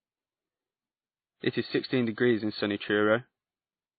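Throughout the speech, the sound has the layered smearing and warbling of transcoding between lossy codecs, likely an MP3 at around 24 kbit/s re-encoded as WMA at about 32 kbit/s. A spectrogram shows nothing above 4.5 kHz, with patchy, blocky energy below that cut-off.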